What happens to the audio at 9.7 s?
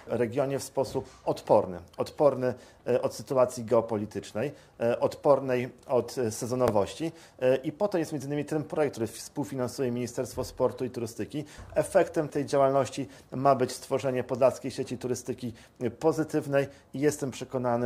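Nothing goes wrong at 9.7 s; the audio plays straight through that moment without any audible fault.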